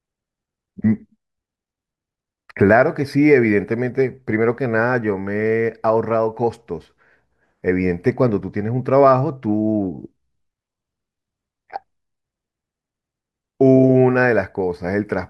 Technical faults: none

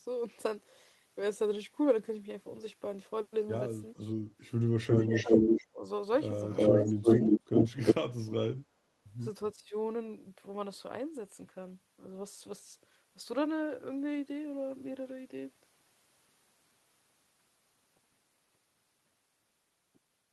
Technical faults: echo leak; speech suppressed in double talk

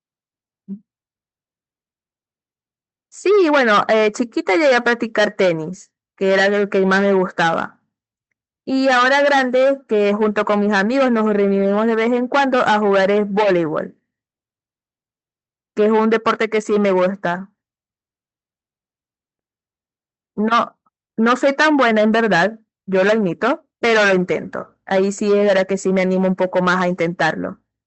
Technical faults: none

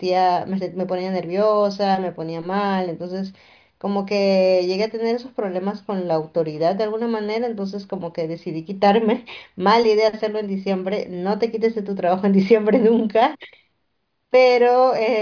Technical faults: none

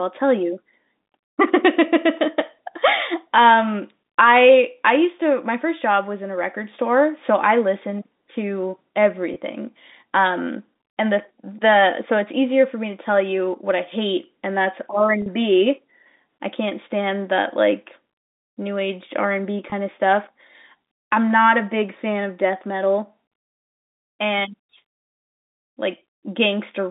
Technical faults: packet loss with pitch repetition

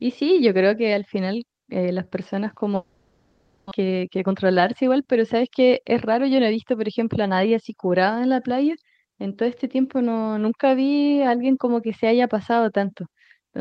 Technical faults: long network dropout; jitter buffer speed-up

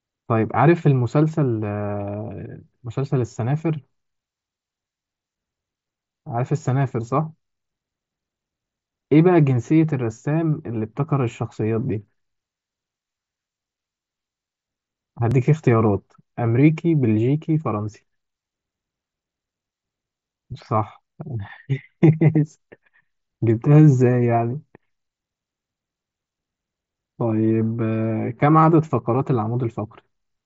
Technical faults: audio missing between chunks

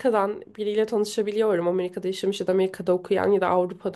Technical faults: none

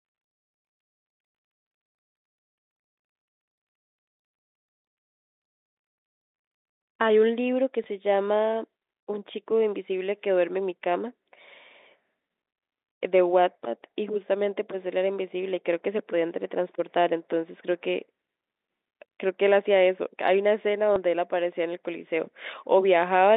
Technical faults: packet loss with last packet repeated

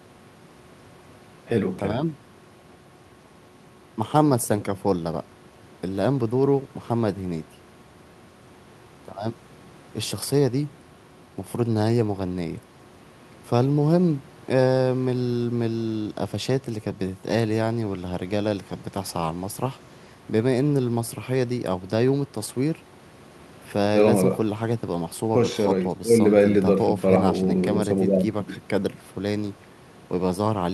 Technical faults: none

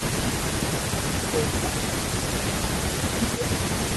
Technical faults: speech suppressed in double talk; echo leak

